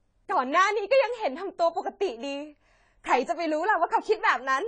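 Throughout, the speech sounds dull and smeared, with nothing above 10 kHz, likely from AAC compression whose low bitrate cuts away the top band.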